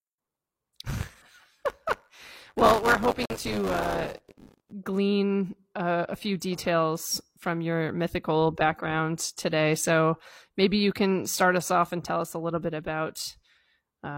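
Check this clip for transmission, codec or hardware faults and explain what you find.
Two faults are present, and they overlap.

From 0.0 to 4.73 s there is buffer tearing, ending just before "glean uh a few". The writer and the hardware reader have slipped, so each 10 ms buffer period carries a small slice, about a tenth, of audio from roughly 20 ms earlier, butted against the current audio with hard joins. The result is a steady robotic buzz at 100 Hz that rides on the speech. It differs from dropouts because nothing goes silent.

From 3.25 to 3.36 s, inside the torn stretch, a corrupt frame was muted. Damaged bits made the decoder reject one compressed frame, and the player filled the gap with silence. The result is a sudden hole of about 0.11 s, and timing carries on unchanged afterwards. This sets it apart from concealment, which would smear or repeat sound, and from tearing, which buzzes but never goes silent.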